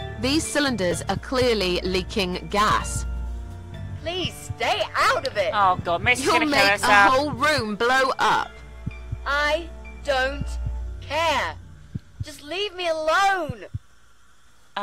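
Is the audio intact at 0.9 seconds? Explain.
No. At 0.91 s there is a brief jumbled blip, caused by chunks out of order: one chunk of roughly 5 ms arrives one chunk late and plays after its successor, leaving three hard joins.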